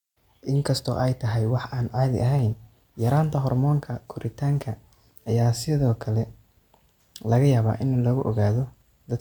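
Nothing here needs flagging: the speech comes through without any technical faults to point to at any moment.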